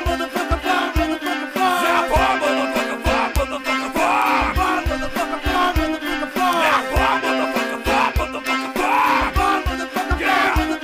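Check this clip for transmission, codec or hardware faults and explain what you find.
Five bit error spikes, at 1.27, 3.36, 4.22, 6.53 and 8.47 s. Each flipped bit throws a sample or two to about -6 to 0 dBFS, heard as one sharp, broadband tick.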